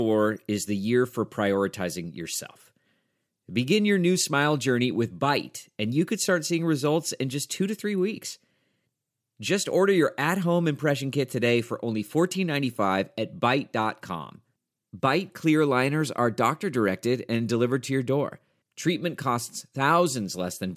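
A speech recording with no technical faults to report. Nothing in the sound calls for a time stamp or a cause.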